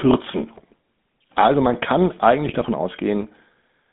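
From start to finish the speech runs through the GSM full-rate codec. The encoder reduces the voice to a vocal-tract filter excited by regularly spaced pulses that keep only every third excitation sample, which fits the 13 kbps full-rate scheme. The line passes roughly 150 Hz to 3.6 kHz, so the top is cut away. The damage is plainly audible as a buzzy, gravelly roughness laid over the whole voice.

At 0.53 to 0.63 s, GSM bit errors corrupt a handful of consecutive decoder frames. Flipped bits land in the filter, pitch and gain values, so the spectrum is bent and the level jumps for each damaged frame, and the voice briefly breaks into squawks and gargling. A longer burst of the same bit errors follows at 2.46 to 2.67 s, right after "man kann", spanning more frames and producing a more sustained run of pops and garbled squawking.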